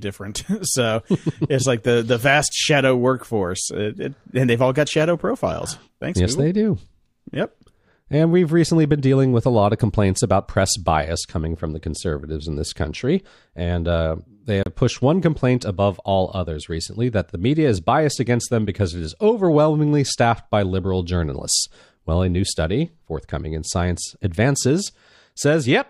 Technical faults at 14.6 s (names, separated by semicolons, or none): Bluetooth stall